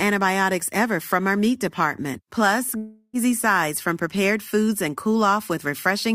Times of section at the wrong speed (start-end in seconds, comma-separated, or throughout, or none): none